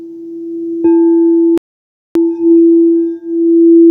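A playback stall runs from 1.58 to 2.15 s: the sound cuts out mid-flow for about 0.58 s, likely because the player ran short of data or its thread was blocked. Time-compressed catch-up follows from 2.15 to 2.71 s, where the player trims its backlog by removing and cross-fading small slices, so the audio plays at twice normal speed without any pitch change.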